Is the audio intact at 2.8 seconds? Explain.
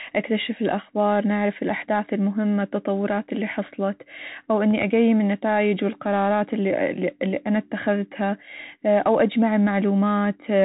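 No, the Bluetooth CVSD headset codec runs throughout, including 2.8 s: its one-bit up-down coding, which fits 64 kbps, cuts everything above 3.8 kHz, leaving scratchy sibilants and granular hiss.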